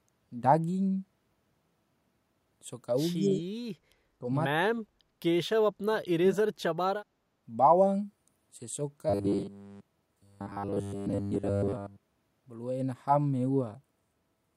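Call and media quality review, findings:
Echo leak, 3.22 to 3.41 s: far-end echo canceller likely leaving residual loudspeaker pickup. A faint delayed copy of the speech returns about 0.24 s behind, roughly 25 dB below the direct signal.

Speech suppressed in double talk, at 3.30 to 3.43 s, 4.21 to 4.25 s, 4.65 to 4.88 s and 5.82 to 6.41 s: echo canceller likely misreading near-end speech as echo while both sides overlap. Level dips about 5 to 10 dB at first, then drops out almost entirely in the last two.

Robotic sound from repeated short buffers, 9.10 to 12.29 s: late audio delivery, likely concealed by looping the last buffer. Most of the stretch is repeats, imposing a rigid 100 Hz metallic buzz that fits a 10 ms buffer, while speech contour roughly survives.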